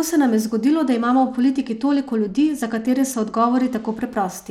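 From 0.85 s, right after "se nam je zgodilo", until 4.08 s, the speech shows a Bluetooth SBC bit pool drop. The link ran short of capacity, so the encoder spent fewer bits per frame, roughly what a fall from 31 to 13 at about 94 kbps would give. The top sub-bands thin out and the rest are coarsely quantised, so the treble dulls and a gritty noise rides along. Unlike a dropout, the sound never stops.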